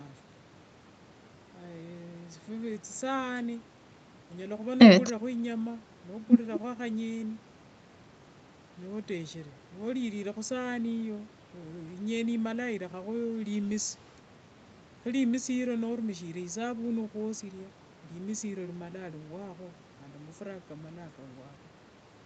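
Nothing stood out as a technical problem on listening to this speech recording.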